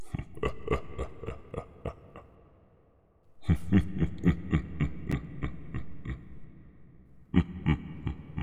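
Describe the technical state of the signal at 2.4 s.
At 2.4 s the audio is intact, with no dropout, distortion, glitch or other technical fault at that moment.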